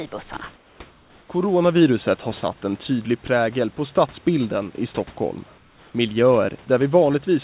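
Three short pauses lose their real background: 0.56 to 0.8 s (240 ms, about 5 dB quieter), 0.9 to 1.28 s (380 ms, about 4 dB down), and 5.58 to 5.94 s (360 ms, about 3 dB down). Each gap turns flat and featureless, a bland hiss instead of the room. That's likely comfort noise in place of the background: the sender went silent during the pauses and the receiver filled them with synthetic noise. The call audio itself is band-limited, with nothing above 4 kHz.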